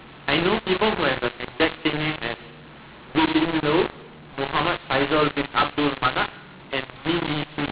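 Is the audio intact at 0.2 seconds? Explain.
No. At 0.2 seconds, as throughout the speech, a mu-law and A-law mix-up is audible. The telephone signal was coded with A-law but decoded as mu-law, so each 8-bit code maps to the wrong amplitude. Levels come out scrambled, quiet samples jump well above silence, and the sound turns harsh and gritty. On a waveform, gaps show a raised noise floor and peaks look irregularly scaled. The spectrogram shows broadband haze filling the whole band below the 4 kHz telephone limit.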